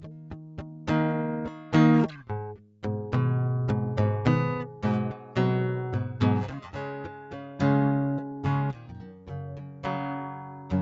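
A noise suppressor built for speech stays on across the whole music clip. It treats held tones and tails as noise, so the level pumps by around 10 dB, visible as a fluttering waveform envelope.

The noise suppressor cuts sound at 0.0–0.88 s, 1.51–1.72 s, 2.08–2.29 s, 2.57–2.83 s, 5.18–5.36 s, 8.74–9.31 s, 9.57–9.84 s and 10.35–10.71 s. Drops of about 4 to 7 dB sink sustained parts and shorten decays, showing as dimmed spectrogram bands and shrunken waveform stretches.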